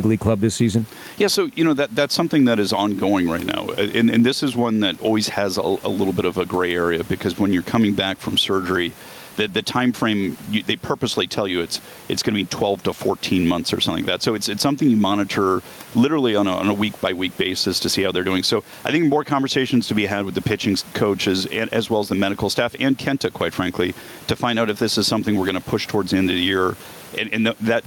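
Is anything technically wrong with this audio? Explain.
Yes. Throughout the speech there is gain pumping. The room noise normally sits about 32 dB below the speech, and the gain swings by roughly 10 dB. The likely cause is input gain set far too high, with a fast limiter or compressor clamping down on each peak and releasing between them, leaving the speech squashed. A noise gate would instead cut the gaps toward silence.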